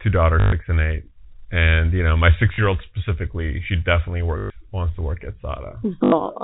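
Packet loss with last packet repeated at 0.40–0.52 s (before "and eight and you"), 2.54–2.58 s, 4.38–4.50 s (before "wants to work at") and 6.04–6.12 s: the receiver replays the last packet, so each gap sounds like a robotic stutter buzzing around 50 Hz, which fits 20 ms packets.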